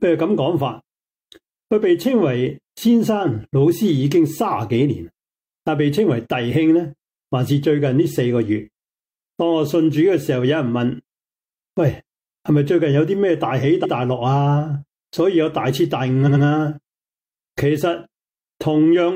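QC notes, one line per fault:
13.80 s and 16.24 s, repeated frames: an 85 ms block, consistent with two compressed frames, replays once at 13.80 s and twice at 16.24 s, adding 85 ms and 171 ms. Each repeat gives a stutter. Unlike a dropout or skip, no sound is lost; material returns and the clip lengthens.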